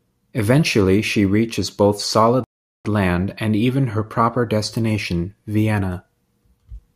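At 2.44 s the speech halts in a rebuffering stall. The player ran out of downloaded audio and waited for more. Silence fills the gap until 2.85 s. Then the speech picks up exactly where it stopped. Nothing is missing, but about 0.41 s is added.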